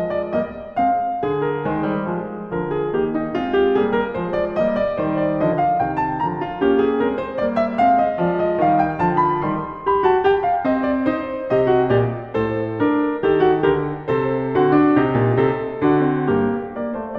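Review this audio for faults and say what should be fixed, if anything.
Nothing in the music stood out as a problem on listening, so there is nothing here that needs fixing.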